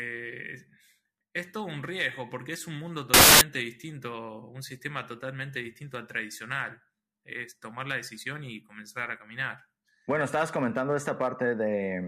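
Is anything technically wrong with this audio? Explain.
Yes. From 3.14 to 3.41 s, samples built from the wrong bytes: misassembled sample bytes push rapidly varying low bits into the high positions, producing a burst of loud, harsh broadband noise.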